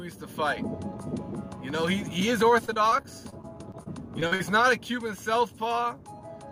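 From 2.65 to 4.41 s the stream suffers repeated packet loss, producing a robotic sound. Data arrives late or not at all, over and over, and each hole is patched by stretching the last received sound before the next hole opens. The sound points to about a dozen short dropouts, the longest 42 ms, with roughly 260 ms filled in and about 15% of the stretch concealed. The audio turns choppy and robotic, with fragments missing.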